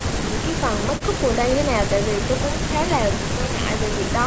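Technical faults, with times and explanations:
No technical faults can be heard in this speech.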